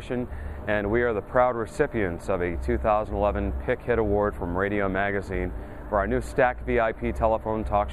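Nothing stood out as a technical problem on listening.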